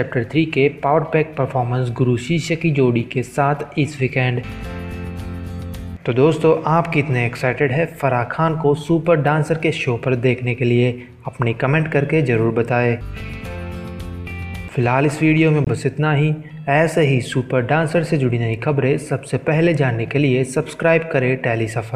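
At about 15.64 s there's a block of digital silence, roughly 23 ms long, ending around 15.67 s. The output just drops to zero and comes straight back with no fade, so you get a brief hole. That length fits a 1024-sample buffer that wasn't filled in time.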